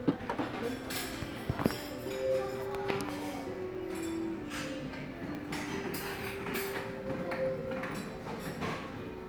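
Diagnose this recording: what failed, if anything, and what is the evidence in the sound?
Sudden jumps at 3.75 s and 5.35 s, each skipping roughly 30 and 20 ms, point to a likely dropped buffer (overrun) at the driver stage, samples overwritten before collection.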